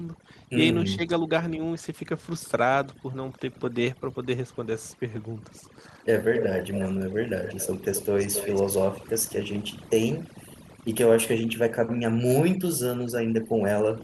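Across the whole clip there is overdone noise removal. The noise suppressor was set too aggressively, so frequency bands sitting near its noise estimate get pulled far down or switched off entirely, along with the quieter parts of the speech that fall in those bands. Between phrases, the background collapses to near silence dotted with twinkling specks.

From 0.96 to 1.09 s the speech is suppressed in double talk. The level dips by about 10 dB, with the affected portion adding up to roughly 70 ms within that window. This is likely the echo canceller reacting to both sides talking at once: unable to tell its own talker from loudspeaker echo, it attenuated everything, and the near-end speech briefly sinks.

Echo leak then appears in four stretches: 6.34 to 6.45 s, 6.61 to 6.88 s, 7.44 to 7.68 s and 7.84 to 8.63 s. Each time a copy of the speech returns 267 ms late, sitting about 5 to 15 dB below the direct speech. 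The loudest is the first and the faintest is the third. The pattern likely comes from a loudspeaker-side echo canceller that failed to remove all of what its microphone picked up, sending that residue back down the line as a delayed, partial repeat.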